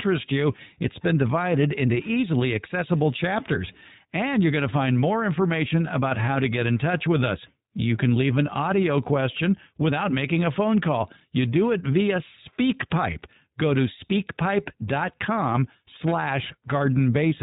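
Speech, coded throughout with the iLBC codec. Nothing above 4 kHz survives, and plainly audible codec damage gives the speech a rough, synthetic texture. Each short frame, which sounds consistent with iLBC's 20 ms mode at about 15 kbps, is coded independently of the one before it.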